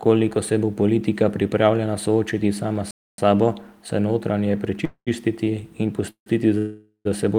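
At 2.91 s the speech cuts out in mid-flow and stays silent until 3.18 s, a playback stall of about 273 ms. The player was likely starved of data or had its output thread blocked. When output resumes, the speech picks up where it stopped.

The first call audio freeze runs from 4.85 to 5.08 s, right after "sabo se notranje". The jitter buffer ran dry, likely because packets were delayed in transit. The receiver bridged the wait by extending the last sound as a fading buzz for 219 ms, including about 70 ms of silence. The speech then continues from where it stopped, so nothing is lost but the timing is pushed back.

From 5.45 to 5.48 s there is a short stall from a late packet. A packet missed its playout slot, so the receiver stretched the preceding sound by 18 ms until the packet arrived. This is heard as a slightly held sound with a faint buzz, and no audio is missing.

Two more call audio freezes follow, each likely caused by held-up packets. 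From 6.10 to 6.28 s a 157 ms fill, about 100 ms of it silent, precedes "za seboj". From 6.58 to 7.07 s a longer 470 ms fill, with about 90 ms of silence, again precedes "za seboj". In both cases the decaying buzz delays the speech, which then resumes intact.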